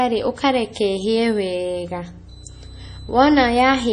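From start to finish the speech has a hard ceiling at 10.7 kHz, with heavy, watery swirling as weak detail flickers in and out between frames. This is likely MP3 compression at a very low bitrate, near 32 kbps. The shifting, chirpy texture on s sounds sets it apart from a plain low-pass filter, which would only dull the treble.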